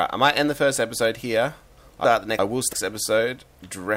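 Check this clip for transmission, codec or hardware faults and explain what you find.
One transmission fault is audible: chunks out of order, from 2.05 to 2.73 s. A 341 ms block arrived one slot late and plays after its successor, so nothing is lost but the sequence jumps. It sounds briefly jumbled, with three hard joins. A waveform or spectrogram shows sharp vertical seams there, with content that doesn't continue smoothly across them.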